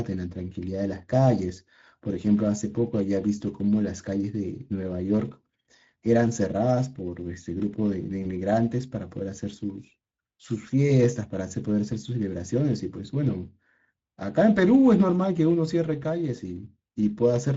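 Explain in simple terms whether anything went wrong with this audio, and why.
A couple of things went wrong here. The whole clip carries the sound of the Speex codec, an older speech codec from VoIP and game chat. It squeezes the voice into very little data by modelling it rather than storing it faithfully, and here that shortcut is plainly audible: the speech comes across noisy and hoarse, with the upper sparkle replaced by a hissy, fake-sounding fill.

Then there's a brief glitch from 8.23 to 8.30 s, which is VoIP packet loss concealed by the speech codec. A tiny chunk of audio went missing in transit, consistent with a single lost 20 ms frame. The decoder covered the gap by stretching out the last bit of sound it had and fading it down, so you hear a short buzzy or smeared moment, and the voice stays weak or distorted for a few tens of milliseconds afterwards while it recovers.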